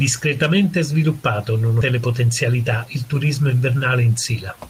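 This is a speech clip with two timing faults close together. At 1.81 to 1.83 s there is a skip ahead. Playback jumps forward with no gap filled in. Roughly 0.4 s of speech is gone. The sounds on either side are butted straight together, so the jump is abrupt. The cause is a stretch of audio being dropped while later audio was already queued. That happened either in transit or when the jitter buffer overflowed. The listener simply loses that piece of speech.

From 1.91 to 3.13 s comes a jitter buffer speed-up. The speech runs at about 109% of normal speed. The pitch stays the same, so the voice is not raised. It just sounds hurried. The receiver had more audio buffered than it wanted. It cut the excess by removing short slices, each one or a few pitch periods long. It did this many times in a row. Altogether around a tenth of a second was trimmed away.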